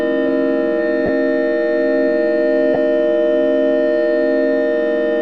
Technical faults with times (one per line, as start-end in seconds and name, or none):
1.06-1.09 lost LE Audio frames
2.74-2.77 lost LE Audio frames